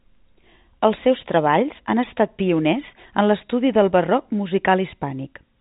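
Nothing stood out on listening to this speech recording.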